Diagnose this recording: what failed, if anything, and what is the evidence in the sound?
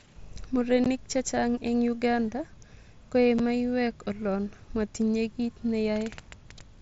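Unconcealed Bluetooth headset packet loss on the wireless headset link: abrupt gaps at 0.84 s (15 ms, before "chechang eng") and 3.39 s (7.5 ms, before "maiyek olon motinye kiit"), fitting two and one lost mSBC frames left unfilled. The waveform drops flat, and the spectrogram shows thin blank vertical stripes.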